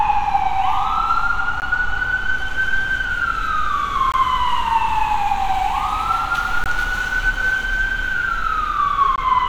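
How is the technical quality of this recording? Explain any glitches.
The recording has one recurring fault: a gap between chunks. It appears at 1.60, 4.12, 6.64 and 9.16 s. The audio was handled in 2.5-second chunks, with 20 ms of silence inserted at each join. Nothing is lost, but the sound drops out briefly. Each dropout is a short, hard-edged hole, repeating at a steady rhythm.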